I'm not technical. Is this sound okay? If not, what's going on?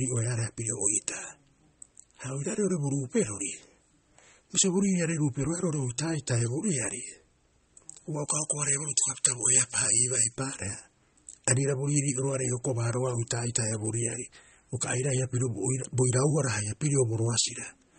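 No. The whole recording has the watery, swirly quality of heavy MP3 compression. Everything above about 8.4 kHz is simply missing. S sounds chirp. The likely cause is a file squeezed very small.

From 8.26 to 10.36 s there is a second problem, pre-emphasis left on. The treble was boosted for recording or transmission and never turned back down. That stretch sounds thin, harsh and too bright, with hissy, exaggerated s sounds.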